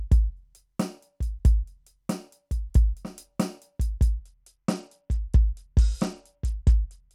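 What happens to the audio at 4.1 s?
From 4.13 s to the end, a Bluetooth SBC bit pool drop starves the top sub-bands, dulling the treble and adding gritty noise, which fits roughly 90 kbps.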